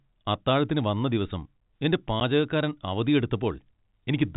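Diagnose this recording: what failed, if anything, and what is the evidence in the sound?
Packet loss filled with silence at 2.2 s: a 10 ms gap with hard edges, which fits one network packet dropped and replaced by silence.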